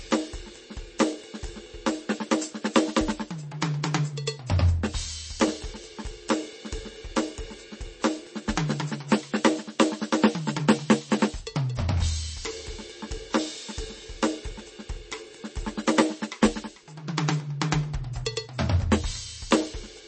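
MP3 compression is the likely cause throughout: the music's treble stops at 8.3 kHz and bit-starved detail turns watery, which fits a bitrate near 32 kbps.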